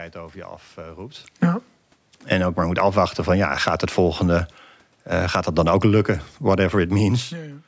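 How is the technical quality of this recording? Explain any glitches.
The recording has two gain faults, both from the automatic gain control.

Automatic gain rising runs from 2.68 to 4.25 s, just after "ook maar". The control judged the speech too quiet and raised its gain by about 3 dB. Voice and room noise swell together.

Automatic gain falling follows from 4.25 to 7.5 s. The control then judged the input too loud and pulled gain down by about 5 dB. Speech and background sink together.

The level shifts near 1 s and 7 s come from the talker moving relative to the microphone, not from the system.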